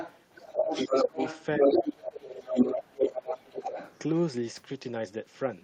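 Speech clip in which the other side's voice leaks through from 0.0 to 1.95 s, a little louder than the talker, and again from 2.28 to 3.99 s at about equal level, likely from loudspeaker echo the canceller missed, showing as a second overlapping harmonic pattern on a spectrogram. The speech is also suppressed in double talk at 0.36–0.7 s, 0.87–1.19 s and 1.58–3.73 s, with the talker's level dipping by up to around 15 to 20 dB and the waveform visibly notched while both sides speak.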